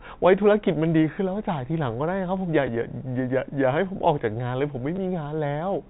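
At 2.67 s and from 4.96 to 4.98 s, packet loss with last packet repeated replaces 10 ms, then 20 ms, with replayed audio. The first, a single repeated packet, sounds like a small blip; the second, a two-packet run, sounds like a short robotic stutter.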